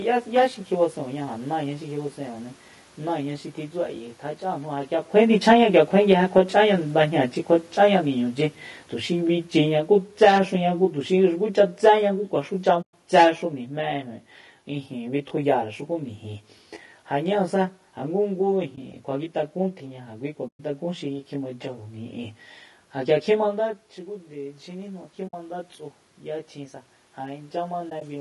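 Throughout the recording, a channel delay of around 20 ms has been summed to mono, producing comb filtering. Content common to both channels cancels at evenly spaced frequencies starting near 20 Hz, so the speech sounds rough or slightly doubled. On a spectrogram this appears as a fixed ladder of thin horizontal dark stripes that stays put while the voice moves. The waveform shows no separate echo, because the two copies are too close together to be heard apart.

Also present throughout is coarse, grainy coding damage that is plainly audible. The voice has a rough texture, there is hiss filling the gaps between harmonics, and the top band sounds flattened and synthetic. This is most likely low-delay AAC compression of the AAC-ELD kind, at a rate that fits about 32 kbps. Its short frames resolve pitch harmonics poorly. On a spectrogram the harmonic lines look smeared and speckled, and the upper region is blotchy rather than finely detailed.

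From 5.34 s to 18.64 s there is automatic gain falling. The gain control judged the input too loud or its background noise too strong and pulled the level down gradually, by about 12 dB in total. The voice and the room noise sink together, which is what separates this from the talker's own shift near 5 s. On the waveform the envelope tapers downward over those thirteen seconds, and the spectrogram dims evenly across all frequencies, background included.

AAC frame loss with muting occurs at 12.82–12.94 s, at 18.75–18.78 s, at 20.47–20.60 s, and at 25.27–25.34 s. A final group falls between 27.89 and 28.02 s, where two dropouts of around 20 ms each are scattered across about 120 ms. In each case the decoder zeroed the missing spectrum, and the overlapping windows fade the sound out and back in. The single lost frame is a brief dip and the runs are soft-edged holes. A spectrogram shows full-height vertical gaps, and the waveform shows short tapered silences.

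From 19.8 s to 28.16 s there is automatic gain rising. Having found the input too quiet, the gain control lifts the level by about 6 dB, so the voice and background swell together over several seconds. This is separate from the talker's movement near 23.5 s. The waveform envelope widens steadily, and the spectrogram brightens uniformly, noise floor included.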